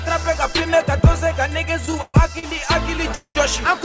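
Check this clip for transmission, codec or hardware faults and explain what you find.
Two transmission faults are audible, both late-packet problems, heard over a call path whose band stops at 8 kHz, consistent with G.722.

From 1.86 to 2.45 s there are repeated stalls (stutter): the jitter buffer ran dry four times, so held sound fills about 0.2 s (longest gap 124 ms), dragging without loss.

From 3.15 to 3.37 s a call audio freeze holds the last sound, fading to silence for 70 ms. Packets were likely delayed about 0.2 s, then the audio resumed where it stopped.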